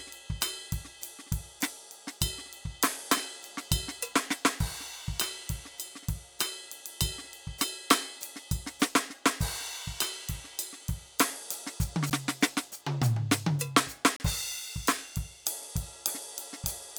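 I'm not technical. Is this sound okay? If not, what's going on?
No. The music has two tiny dropouts: a sharp tick at 12.10 s and a short hole from 14.16 to 14.20 s. Each is a block of digital silence, where the playback briefly got nothing but zeros, likely because the computer fell behind feeding audio.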